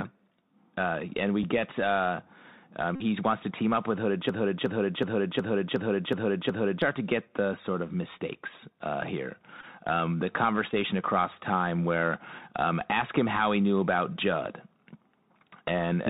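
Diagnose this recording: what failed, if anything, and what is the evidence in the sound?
The codec stage is at fault throughout: the Bluetooth CVSD headset codec. Nothing reaches above 4 kHz, s sounds are scratchy, and a granular hiss sits under the speech. This fits 64 kbit/s CVSD, whose one-bit delta steps cannot follow fast, loud high-frequency content.

The wireless link drops packets, and the Bluetooth headset packet is repeated in their place. At 1.43 s, after "and we" and before "get uh um", there is a single small tick. At 2.96 to 3.02 s there is about 49 ms of buzz near 267 Hz. At 9.61 to 9.65 s, after "of mistakes uh here", and at 10.71 to 10.74 s, before "across time where um", there are shorter buzzes of about 15 ms each. The chip re-decoded stale packets at a 3.75 ms period.

From 4.29 to 6.82 s there is a broken-record loop: a 0.37 s fragment repeats exactly, back to back, seven times. 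The audio due in that span is missing. The likely cause is a stall in playback, the encoder or the stream, which kept resending the last buffered fragment.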